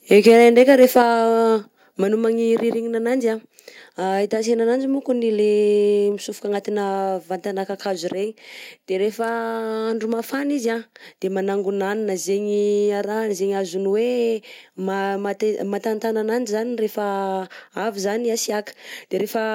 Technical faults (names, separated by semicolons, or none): microphone overload; microphone volume stepped down